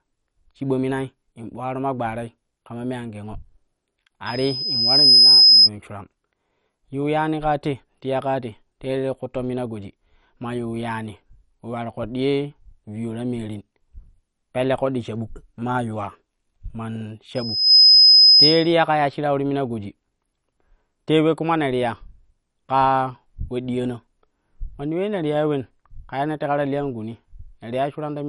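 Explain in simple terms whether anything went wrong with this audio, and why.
Two things went wrong. The whole recording sounds muffled and a bit gurgly, with nothing above about 11.3 kHz. That's likely MP2 compression: the encoder ran short of bits, shut off the upper frequency bands, and roughly rounded off what was left.

There's also loudspeaker feedback squeal twice, from 4.26 to 5.70 s and from 17.35 to 18.73 s. The microphone picked up its own speaker, and a single 5.1 kHz tone fed on itself, swelling over about a second the first time and under half a second the second, until it was far louder than the speech.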